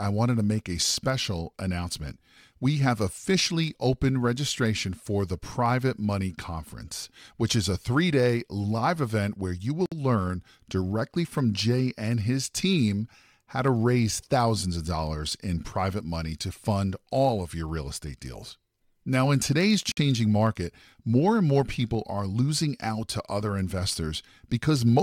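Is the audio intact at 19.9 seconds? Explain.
No. A gap at a join of encoded pieces runs from 19.92 to 19.97 s, between "in today's" and "market more and more". Separately encoded pieces were joined untrimmed, leaving a 54 ms silence. On a waveform it is a flat stretch with smeared edges.

A block size mismatch (truncated) also runs through this moment. Each block's tail is discarded, causing a buzz at about 92 Hz. A spectrogram shows vertical striations at that rate.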